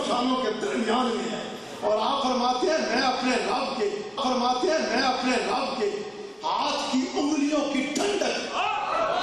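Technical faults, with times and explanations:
4.17 to 6.17 s, stream segment repeated: about 2 s of the programme plays a second time, with a small blip where playback jumps back. The player queued or fetched the same chunk of the stream twice, so that stretch just runs again.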